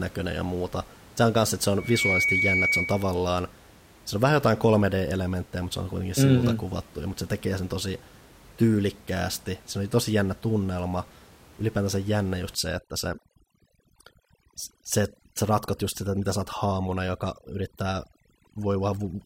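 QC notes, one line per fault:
1.79 to 3.20 s, loudspeaker feedback squeal: a 2.3 kHz tone builds up over roughly a third of a second to about 5 dB above the speech, as the microphone–loudspeaker loop exceeds unity gain.
12.55 to 19.25 s, overdone noise removal: heavy noise reduction gates individual frequency bands to near silence, leaving twinkling specks in the background.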